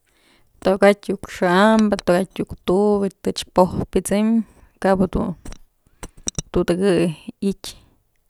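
Nothing technically wrong turns up anywhere in this bit of speech, so there's nothing to flag.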